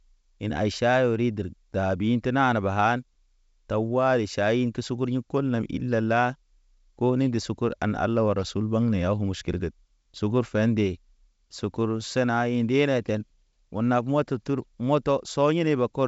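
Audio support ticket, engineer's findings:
No fault found in this speech clip; the G.722 wideband telephone coding path at 64 kbit/s is working normally, with content reaching up to about 7.7 kHz.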